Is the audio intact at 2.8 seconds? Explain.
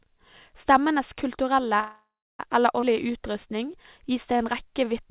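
No. A skip ahead occurs at about 2.81 to 2.84 s, just after "kulturelle eller". Roughly a fifth of a second of speech was discarded, likely by an overfull jitter buffer. Playback jumps forward, joining the two sides almost directly with only a 13 ms gap.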